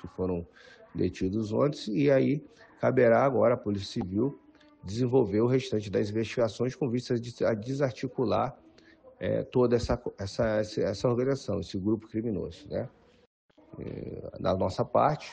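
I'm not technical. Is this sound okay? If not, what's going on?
No. There are two brief glitches caused by damaged data in a compressed stream. The first runs from about 4.01 to 4.03 seconds. The second is a short blip at about 8.56 seconds. A small piece of the compressed file was corrupted. When the player reached those spots, it could not read them properly. It lost its place for a moment, then found the next readable chunk. That stumble comes out as a quick chirp, squawk, click or short hole.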